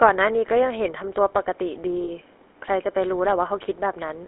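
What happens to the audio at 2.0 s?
From 2.04 to 2.09 s there are lost GSM frames. For about 40 ms, a span that fits two 20 ms frames, the decoder has no valid data and reuses the parameters of the last good frame. The sound is briefly held as a rough, metallic ring rather than dropping to silence. That held ring is what separates it from a plain dropout or a zero-filled packet gap, which would leave a clean hole or a click.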